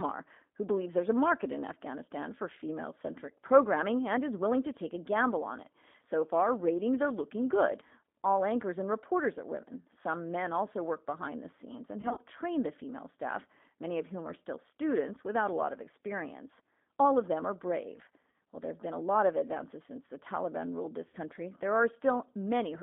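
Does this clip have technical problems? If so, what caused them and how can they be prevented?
Yes. Throughout, the speech carries the sound of the G.729 codec. The band runs only from 200 Hz to 3.5 kHz. The speech is clear but rough and slightly synthetic. This points to an 8 kbit/s G.729A link. The codec rebuilds each short frame from a vocal tract filter, a pitch estimate and a few pulses, so fine detail is lost. A wideband codec such as G.722 or Opus, given enough bitrate, would prevent this.

There is also VoIP packet loss concealed by the speech codec. It occurs at 12.01 to 12.20 s, 18.30 to 18.34 s and 21.08 to 21.17 s. The first event loses about 80 ms of audio in gaps of up to 40 ms spread over 160 ms. The second loses 40 ms and the third 60 ms. In each gap, the decoder repeats its last pitch and filter with falling gain. This gives a brief buzzy or noisy, fading smear, and the speech stays weak just after. 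A wired connection, QoS priority for voice traffic and a suitably sized jitter buffer would prevent this.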